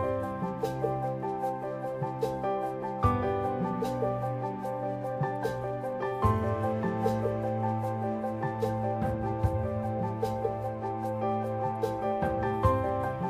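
No technical faults can be heard anywhere in the audio.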